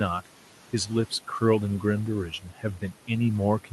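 Noise suppressor artifacts run through the whole speech clip. The suppressor pulls the steady room noise down by about 12 dB frame by frame, so the background sinks in the pauses and rises again under speech, which sits about 19 dB above it.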